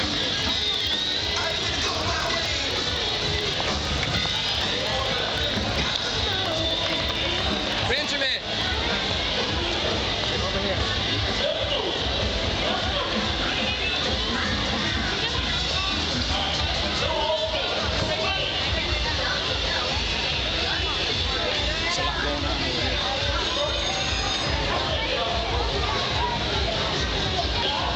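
From 0.11 s to 8.74 s the audio has periodic USB or driver dropouts: regular ticks every 63.5 ms, around 150 in all, each a skip of roughly half a millisecond where samples are simply lost, consistent with a background task repeatedly stalling the USB bus or audio driver.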